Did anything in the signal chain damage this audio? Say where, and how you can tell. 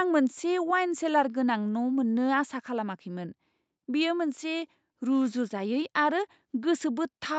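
No, nothing damaged it.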